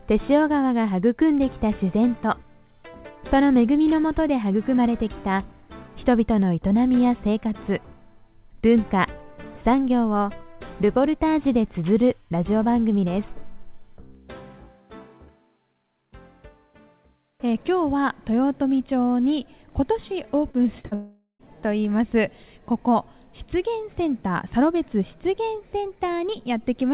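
At 20.51 to 20.56 s and again at 20.80 to 20.86 s, short concealed packet loss occurs: about 30 ms of the stream failed to reach the decoder each time, and the receiver extended the preceding sound to cover it, giving a brief smear or wobble before real audio resumes.

Directly after, from 20.86 to 20.94 s, comes a burst of packet loss, roughly 60 ms missing in a row. The receiver again carries the last sound forward, about 50 ms of it, and lowers it as it goes, so a short held buzz or fading hiss replaces the lost material.

From 20.94 to 21.42 s the gap widens into what is likely a long network dropout, with about 450 ms gone. A continued, steadily fading copy of the last sound fills most of it, then roughly 110 ms of near-silence, before the audio returns further along. Throughout, the band stops at 4 kHz, consistent with G.711 A-law at 64 kbps.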